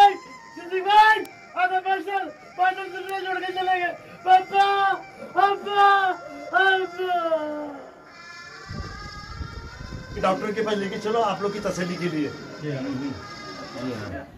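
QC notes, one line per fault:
0.33–14.13 s, word clock ticks: about fifteen ticks at a steady rate of roughly one per second. The receiving clock is not locked to the sender's, so a sample is dropped or repeated at each slip. The rate points to a mismatch of roughly 30 ppm.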